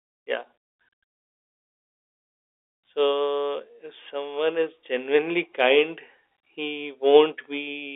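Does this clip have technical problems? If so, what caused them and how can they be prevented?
No, there are no technical problems to report here.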